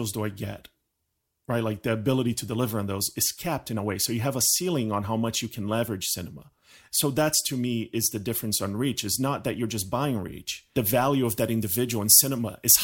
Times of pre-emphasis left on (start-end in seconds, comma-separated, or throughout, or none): 11.25-12.84